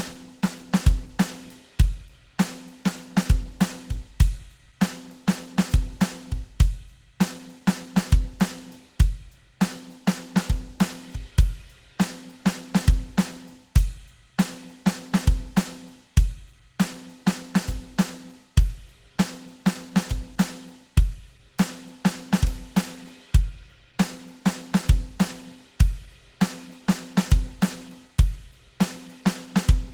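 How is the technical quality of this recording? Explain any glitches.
The technical quality is poor, with plainly audible codec damage across the whole recording. Throughout, the music was likely passed through Opus compression at a very low rate, around 16 kbps, with the encoder in its hybrid speech mode. Starved bands get folded or noisy fill, so the music sounds muffled, hoarse and grainy, even though the content still extends to about 20.2 kHz.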